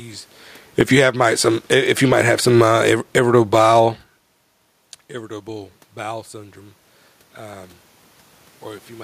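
From 0.65 s to 3.74 s the speech shows automatic gain falling: the gain control judged the input too loud and eased its gain down by about 6 dB over roughly three seconds, so the level sinks steadily. The room noise sinks with the speech. That is what separates it from the talker moving around half a second in, which only changes the speech level and leaves the background where it was.

Overlapping that, from 1.03 s to 4.02 s, there is automatic gain rising, a gain increase of about 4 dB spread over about three seconds. Here the control judged the input too quiet and pulled it up, so speech and room noise swell together. The talker moving near 4 s would change only the speech.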